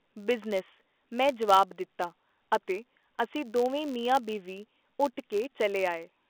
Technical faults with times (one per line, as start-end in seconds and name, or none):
0.00-6.30 filter restarted on every block